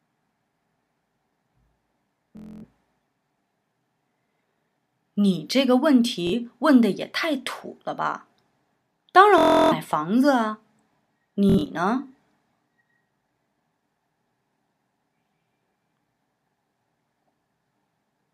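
Bluetooth stutter hits four times, at 2.37, 6.27, 9.38 and 11.50 s. Each time, packets went missing or arrived late, so the receiver kept replaying its last short slice until fresh data turned up. You hear a buzzy, machine-gun repeat, then the sound jumps ahead as if it never stopped. The gaps are about 255, 46, 325 and 139 ms, and the last is broken into bursts over roughly 190 ms, the longest run 70 ms.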